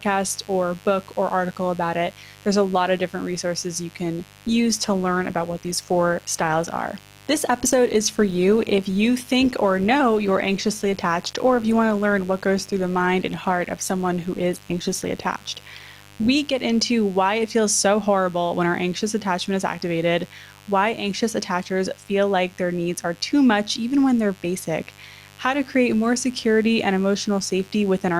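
A steady, raspy buzz sits under the speech from start to finish, well below the talker but always audible, roughly 25 dB down. It is mains buzz: sharp switching spikes from something like a dimmer, a rectifier or an unshielded cable got into the signal twice per cycle of the 50 Hz supply, so the hum carries a long ladder of 50 Hz harmonics reaching up into the kilohertz range. From 4.29 s, right after "different resources you can", the speech abruptly turns rougher as codec artefacts rise. It stays that way until 16.29 s, where full clarity snaps back just before "get into why it". There is no dropout at either edge. This is an adaptive stream at a lower bitrate: the player switched to a cheaper encoding for those 12 seconds because the connection slowed, and the sound fits Opus falling from about 64 to 24 kbit/s.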